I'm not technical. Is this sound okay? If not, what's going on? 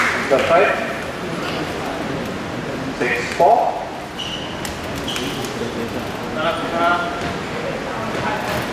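Yes, nothing stood out as a problem when listening to this sound.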